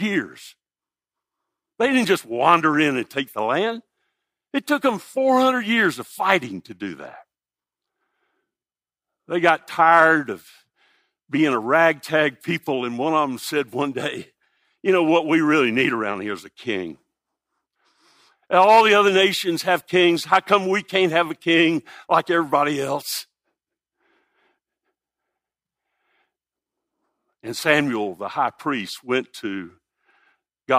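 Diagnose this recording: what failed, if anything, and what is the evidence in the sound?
Nothing in the recording points to a failure at any stage of the signal chain: level, continuity and timing hold steady and no event stands out anywhere in the audio.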